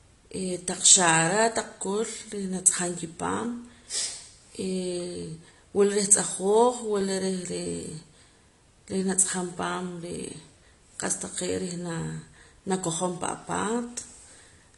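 From the first moment the speech carries AAC compression damage, most likely from AAC-LC at a low rate, which fits a bitrate around 32 kbps. The codec discards everything above 11.1 kHz and quantises the remaining bands coarsely, so the voice sounds dull and smeared, with a plainly audible warbling, fizzy edge on sibilants. On a spectrogram the energy stops at a hard ceiling near 11.1 kHz, with patchy holes and blurred texture in the upper bands below it.

From 1.65 s to 14.15 s there are clock drift buffer slips, recurring every 1.79 s, about seven in all. Two clocks disagree by a couple of hundred parts per million, likely the cause, so the buffer between them creeps until a small block, roughly fifteen samples, is dropped or repeated. Each slip is a short click at that steady interval. The waveform shows a tiny step discontinuity at each one, and the spectrogram shows a thin vertical broadband line.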